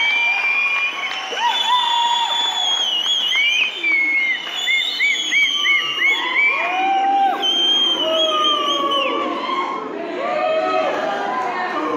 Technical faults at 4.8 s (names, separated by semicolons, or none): none